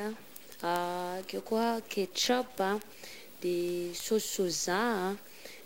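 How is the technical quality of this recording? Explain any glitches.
The recording has two technical faults, both running through most of the speech.

A stuck bit is the likely cause of the distortion heard throughout: one data bit is held fixed, throwing off many sample values, and even the pauses fill with noise.

Word clock ticks run from 0.13 s to 5.58 s. Two unlocked clocks drift a few hundred parts per million apart, so one sample slips roughly every 0.07 s, around seventy sharp, uneven ticks in all.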